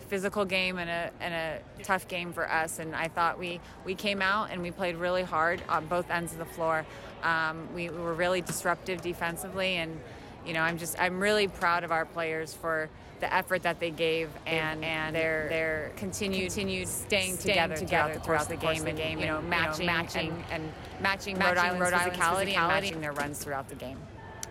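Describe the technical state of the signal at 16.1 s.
A doubled audio track runs from 14.52 to 22.90 s: a second, equally loud copy trails about 0.4 s behind, likely from a slower duplicate capture path.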